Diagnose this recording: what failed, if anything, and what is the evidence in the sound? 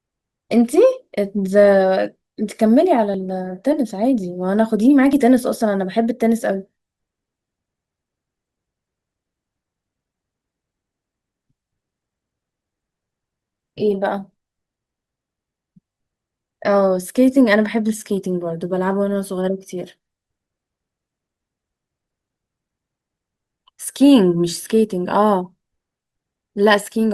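What failed is at the streaming stage, specifically an overlap between stream segments. You get tiny clicks or skips in the speech at 1.17, 3.14, 5.13 and 10.07 s, each a discontinuity where a few milliseconds of audio simply go missing. The segments run 1.0 s long, and two adjacent ones carried timestamps that overlapped, so the player trimmed the supposedly doubled stretch. That audio wasn't actually duplicated, though, so the waveform jumps across the gap.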